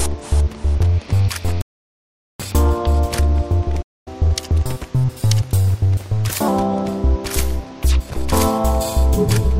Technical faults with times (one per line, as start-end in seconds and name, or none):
1.61-2.40 rebuffering stall
3.82-4.08 playback stall
4.08-6.48 catch-up at higher speed